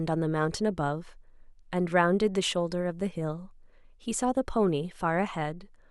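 A speech recording with no technical faults to report. Nothing in it calls for a time or a cause.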